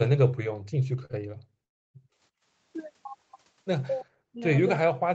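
Speech carried over a call, with four kinds of fault. The echo canceller turned the microphone down hard while the far end played, so the background is gated from 0.53 to 2.45 s: room sound dips by as much as about 38 dB and drops away for roughly a second and a half in total before returning. Packets arrived late twice at the jitter buffer, giving a short stall from a late packet at 1.05–1.21 s, where about 42 ms is filled in, and another at 1.12–1.15 s with 16 ms filled. Each time the sound is held a touch too long with a slight buzz or dip, but nothing is lost. From 1.64 to 1.96 s the audio halts in a call audio freeze, likely from packets held up in transit. The receiver bridges about 0.3 s, nearly all of it silence, then carries on from where it stopped. Finally, the echo canceller likely could not separate this talker from loudspeaker echo while both sides spoke, so speech is suppressed in double talk at 4.03–4.47 s and again from 4.78 s to the end, dropping by around 40 dB. 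Above all this, the Opus call path limits everything to 8 kHz.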